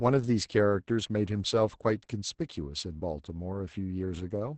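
Opus voice compression runs throughout this speech clip, and the damage is heavy. The band stops near 8 kHz, and coarsely coded linear-prediction excitation makes the voice muffled, hoarse and faintly robotic, which points to a low bitrate around 10 kbps.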